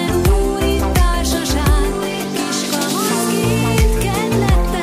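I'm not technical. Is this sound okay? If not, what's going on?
No. From 1.34 to 1.43 s there is a short chirp-like burst: a corrupt frame decoded. A couple of compressed data blocks arrived damaged, and the player decoded them anyway, producing sound at the wrong pitches for that brief moment.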